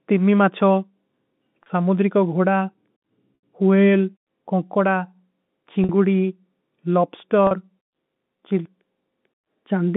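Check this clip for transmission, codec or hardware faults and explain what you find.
Four brief dropouts in the speech. At 1.63, 5.84 and 7.47 s the sound holds on a buzzy, slightly frozen tone for 30, 50 and 40 ms; at 3.35 s the 80 ms gap fades into silence, and the speech returns with a short cross-fade. This is packet loss with pitch repetition: the receiver loops the last pitch period to cover lost packets, with gaps that fit 10 ms packets. The narrow G.711 telephone band is audible throughout.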